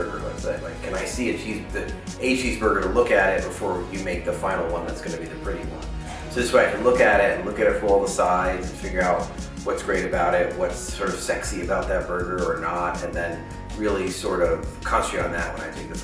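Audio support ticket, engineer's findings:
No faults found on listening; the signal path gave no symptom to trace to a component or mechanism.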